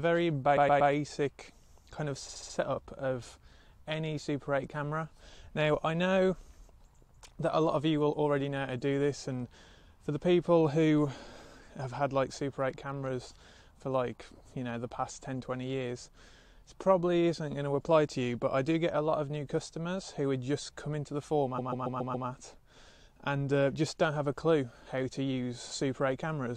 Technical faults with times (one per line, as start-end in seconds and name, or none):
0.56-0.91 repeated frames
2.28-2.56 repeated frames
21.57-22.27 repeated frames